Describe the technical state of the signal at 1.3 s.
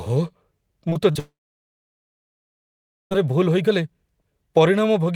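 At 1.3 s you're inside a long network dropout that runs from about 1.19 to 3.13 s. The speech cuts off and the last sound smears into a short fading buzz for roughly a tenth of a second, then it's basically dead silence for nearly 1.8 s. That's likely the receiver running out of incoming audio and papering over the gap, so close to 2 s of the original is simply gone when sound resumes.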